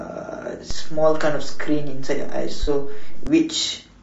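Low-delay AAC compression runs through the whole speech clip: the voice sounds rough and grainy, with noise filling the gaps between harmonics and a thin, synthetic top band. This is likely AAC-ELD coding at a bitrate around 32 kbps, where its short frames resolve pitch harmonics poorly.

A DC step occurs at 0.71 s, when the waveform's zero line suddenly jumps to an offset. The offset ends at 3.27 s. Each jump is heard as a low thump or click while the speech itself carries on unchanged.

AAC frame loss with concealment falls between 2.63 and 2.68 s. About 40 ms of audio, which fits two lost frames, was rebuilt by the decoder from the last good spectrum, leaving a brief smeared, noisy or phasey patch in the speech.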